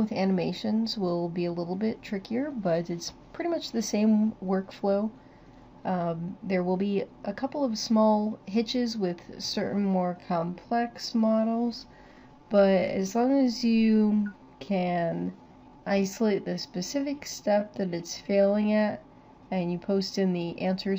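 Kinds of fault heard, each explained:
Time-stretched section: From 9.42 s to 19.16 s the pace abruptly slows to 0.674 times normal, yet the pitch stays put. The slowed sound drags. This is likely software lengthening the audio to fit a duration by repeating short pieces.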